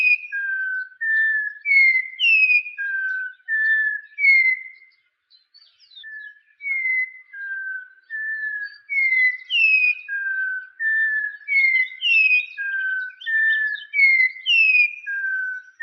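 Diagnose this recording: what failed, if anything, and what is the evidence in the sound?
Nothing here seems to have gone wrong at any stage of the chain, and there's nothing in the sound that points to a fault worth chasing.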